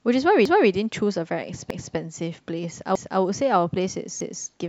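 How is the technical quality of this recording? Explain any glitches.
The recording has a regular glitch from overlapping chunks, and it's the main thing you'll notice. It happens four times, at 0.45–0.70 s, 1.70–1.95 s, 2.95–3.20 s and 4.20–4.45 s. The audio was handled in 1.0 s chunks, but each new chunk starts 250 ms before the previous one finished, so a quarter-second of speech plays twice at every join. You hear it as a stutter that repeats on a steady beat.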